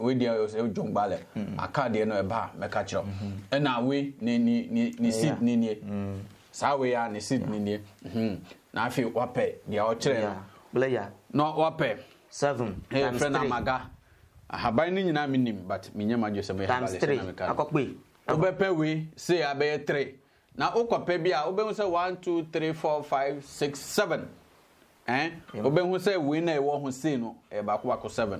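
No technical faults can be heard anywhere in the audio; the signal stays continuous and stable throughout.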